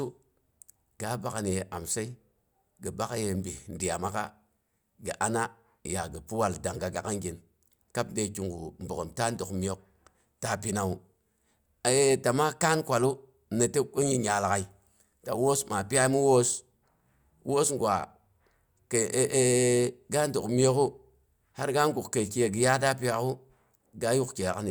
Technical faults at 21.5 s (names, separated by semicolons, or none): none